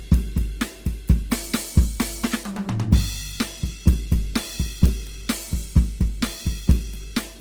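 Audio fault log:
Throughout: Opus compression. The music sounds grainy and rough, with sustained tones turned noisy rather than swirly, because bands are filled with folded or noise-like content when bits run short. Damage is plainly audible, which fits a low bitrate of about 16 kbps in Opus's music mode, the likely cause. A spectrogram shows energy reaching about 20.3 kHz with few holes, but high bands appear speckled and smeared instead of cleanly harmonic.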